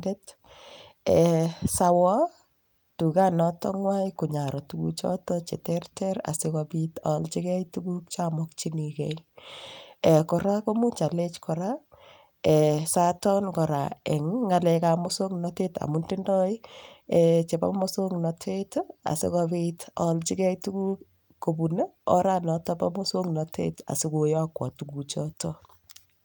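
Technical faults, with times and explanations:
No technical faults are audible anywhere in the speech recording.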